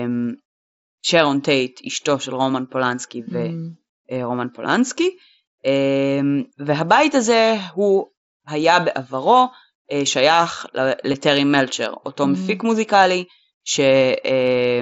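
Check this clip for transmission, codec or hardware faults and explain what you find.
There's one fault, and it's small. At 11.13 s there's a concealed Bluetooth headset packet loss: about 7.5 ms of audio went missing, which fits a single dropped packet, and the receiver patched the gap by repeating a closely matching slice of the preceding waveform. At this length it's nearly invisible. The mSBC headset codec's 8 kHz ceiling and light graininess on louder sounds can be heard throughout.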